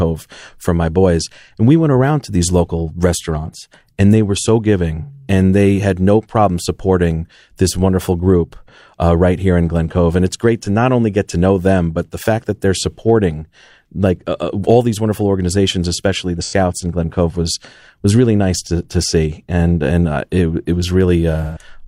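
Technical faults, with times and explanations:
16.43–16.54 s and 21.43–21.63 s: AAC frame loss with concealment. Gaps of about 85 and 128 ms, fitting two and three lost frames, are filled with a smeared, phasey repeat of the preceding spectrum, not a silent dropout.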